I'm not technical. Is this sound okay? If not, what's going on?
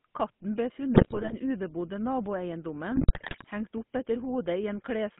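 No. The whole clip carries the sound of the GSM full-rate codec, the original digital mobile phone speech coder. It rebuilds the speech from a rough model driven by pulses, so the speech comes out buzzy and gravelly, and nothing above about 3.5 kHz survives.

There are also two bursts of GSM bit errors, from about 0.94 to 1.35 s and from 2.96 to 3.46 s. Corrupted data reached the decoder, so the speech breaks into squawks, pops and gargling there. The second burst is the heavier one.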